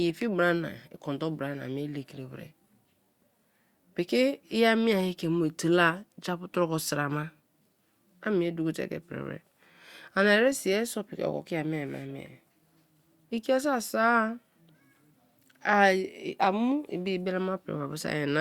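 No technical faults can be heard in this recording.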